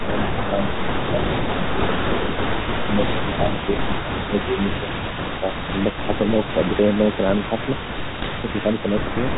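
Speech over what sounds like a 32 kbit/s G.726 ADPCM phone link, carrying a faint, delayed copy of itself the whole way through, about 15 dB down and trailing by 312 ms, likely an echo leak from a speakerphone whose canceller isn't catching everything. The level also dips by up to about 10 dB at 0.0 to 0.55 s, 1.14 to 1.18 s, 2.83 to 5.42 s and 9.34 to 9.38 s, which is likely speech suppressed in double talk as the canceller turns down its own talker along with the echo. Then from 8.10 to 8.27 s there's a cluster of pops and rough, briefly level-jumping bursts, the signature of bit errors on an ADPCM link knocking the decoder's predictor off for a few milliseconds each time.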